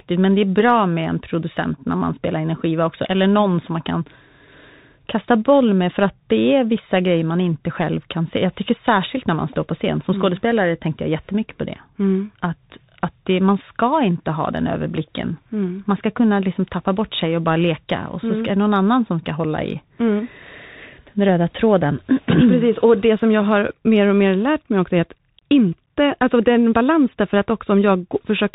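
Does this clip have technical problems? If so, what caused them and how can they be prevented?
Yes. The speech runs through a Bluetooth CVSD headset codec from start to finish, which fits a 64 kbps CVSD link. Its one-bit up-or-down coding with an adaptive step removes everything above 4 kHz, blurs loud high sounds, roughens s sounds, and leaves a granular hiss. Prevent this by recording through a wired microphone or a wideband Bluetooth mode instead of the headset's narrowband call link.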